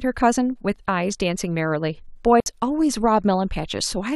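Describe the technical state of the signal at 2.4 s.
Right at 2.40 s there's a digital wireless dropout: the speech cuts to a clean hole of near silence until 2.46 s, about 60 ms. The receiver lost too much of the link's data and muted itself with a very quick fade, so there's no burst of noise on either side.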